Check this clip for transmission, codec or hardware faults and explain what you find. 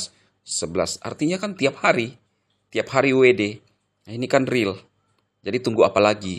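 No faults are audible.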